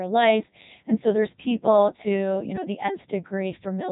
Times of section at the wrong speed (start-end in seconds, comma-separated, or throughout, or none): none